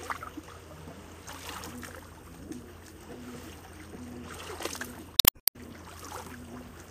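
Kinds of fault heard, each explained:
Damaged data in a compressed stream, 5.16 to 5.49 s: for roughly a third of a second the sound breaks up. Here the bytes carrying this stretch of the encoded audio were corrupted, so the decoder either misread those frames or threw them away, lost its place in the stream, and had to hunt for the next valid frame header before normal playback could resume.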